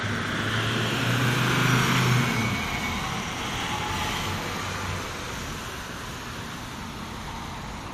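No technical faults are audible anywhere in this audio.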